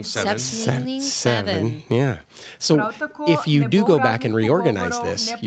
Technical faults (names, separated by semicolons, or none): none